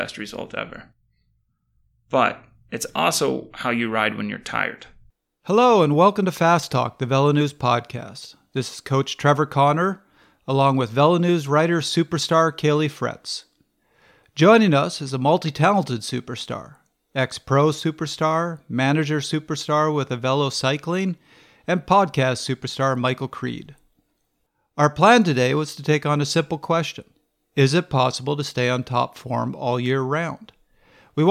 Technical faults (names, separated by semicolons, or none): none